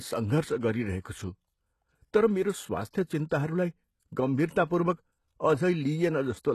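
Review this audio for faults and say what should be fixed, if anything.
Likely HE-AAC compression throughout, at what sounds like about 16 kbps: treble rebuilt from copied lower bands leaves sibilants gritty and metallic, with nothing above 12.3 kHz. Encoding at a higher bitrate with a codec that codes the treble directly would prevent this.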